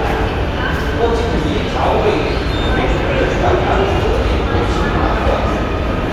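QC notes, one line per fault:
No faults found in this clip.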